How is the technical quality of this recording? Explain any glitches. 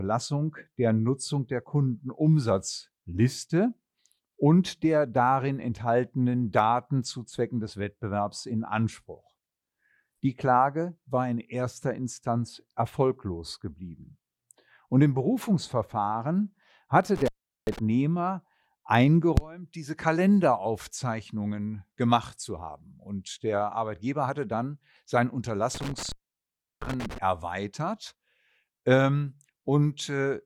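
The speech recording has two glitches, both from an intermittent contact. A loose cable or plug briefly opened the signal path, cutting the audio and crackling as the connection broke and remade. The first, from 17.16 to 17.79 s, holds the line open for about 0.39 s. The second, from 25.75 to 27.18 s just after "hatte dann sein", stays open for about 0.70 s. Each time the speech drops out, leaving faint hiss.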